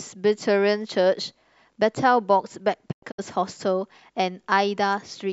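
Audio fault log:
2.91–3.20 s: digital broadcast dropout. The receiver stops getting usable frames and mutes, giving about 160 ms of silence in several short holes across 256 ms, the longest 96 ms, each edge faded over 20 ms; the missing sound never returns.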